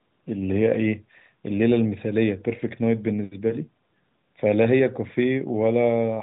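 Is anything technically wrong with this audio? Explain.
No, nothing is wrong: this is speech carried over the AMR narrowband mobile codec, cut off at 4 kHz with only the light coloration that fits its 12.2 kbps mode, and that is normal behaviour for that path.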